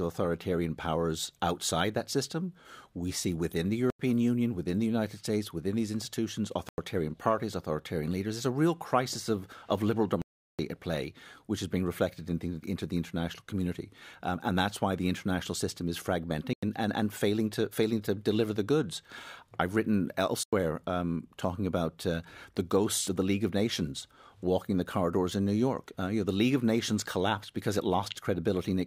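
Blocks of digital silence at 3.90, 6.69, 10.22, 16.53 and 20.43 s: the output dropped abruptly to silence and returned with no fade. Four holes last about 93 ms, fitting a 4096-sample buffer left unfilled; the 10.22 s gap runs 0.37 s.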